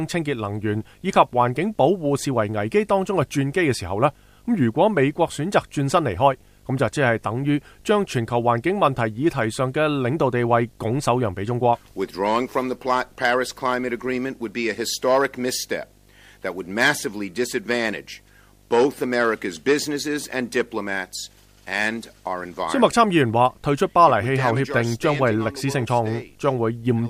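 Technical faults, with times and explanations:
Throughout, video or display buzz: a 50 Hz buzz with hash on top and a whine at 15.6 kHz, roughly 30 dB under the sound. A screen or video cable is leaking its field and line timing into the audio.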